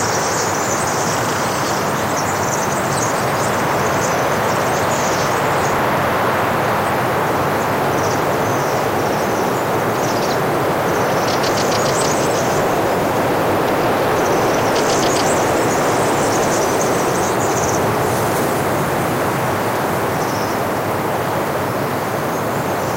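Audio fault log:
Throughout: hard clipping. The sound is driven about 10 dB past what the stage can pass, so roughly 7 percent of samples are cut flat, giving a harsh fuzz on loud moments. The waveform shows squared-off peaks; the spectrogram shows harmonic smear far up the spectrum.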